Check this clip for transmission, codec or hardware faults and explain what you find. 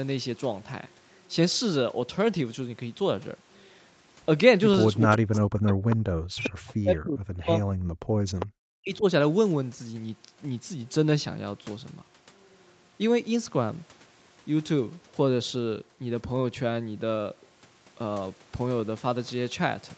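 Echo-canceller faults cluster between 5.06 and 9.04 s in this speech clip, over a call path whose audio stops at 8 kHz.

Speech suppressed in double talk, 5.06–5.86, 6.32–7.66 and 8.63–9.04 s: the near voice dips by about 40 dB in pieces, likely because the canceller mistook it for loudspeaker echo.

Echo leak, 5.34–5.38, 5.90–5.96, 6.44–6.49 and 8.39–8.46 s: brief scraps of the far voice return 401 ms late, about 20 dB below speech at 5.34 and 6.44 s and about 10 dB below at 5.90 and 8.39 s. The likely cause is incomplete echo removal.

Background gated by the echo canceller, 7.94–8.35 s: the canceller clamped the microphone while the loudspeaker played, so room sound drops by about 40 dB for roughly 0.4 s, then returns.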